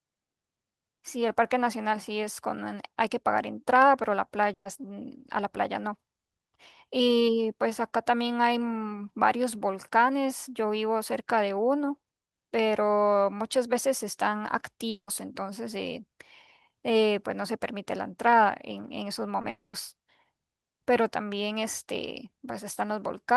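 From 4.53 to 4.67 s a burst of packet loss removes about 120 ms of speech. The receiver extends the last sound and lets it decay, so a brief held buzz or hiss fades out before the speech resumes further on, with that stretch gone.

At 14.89 to 15.09 s the speech breaks off for about 180 ms: a short fading continuation, then roughly 80 ms of silence before it returns with material missing, most likely a long network dropout.

At 19.41 to 19.45 s a short concealed packet loss drops 20 ms. The decoder bridges it by continuing the preceding sound and blending back, heard as a quick smear.

Straight after, from 19.49 to 19.75 s, about 240 ms are absent. A decaying continuation gives way to around 130 ms of silence before the speech comes back further along, again most likely a long network dropout.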